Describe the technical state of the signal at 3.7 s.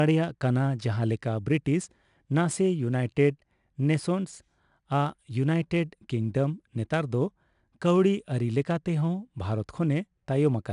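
A gritty hiss rides on the speech at 3.7 s, as it does through the whole clip, with roughness on sharp onsets and nothing above 10.6 kHz. This is 4-bit ADPCM compression, consistent with about 89 kbps: each sample becomes a coarse predicted step, producing level-following noise.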